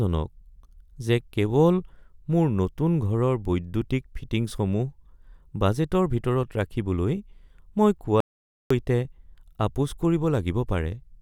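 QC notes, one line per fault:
8.20–8.70 s, audio dropout to silence: the speech cuts off abruptly and the next half second is dead digital silence, with no room tone underneath, before the sound returns mid-flow. The likely cause is a brief loss of input while the recorder kept writing zeros, so that material is gone.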